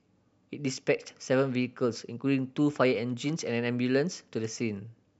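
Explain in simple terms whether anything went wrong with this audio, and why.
Nothing went wrong with this speech recording. Listening closely, no moment in it points to a technical problem.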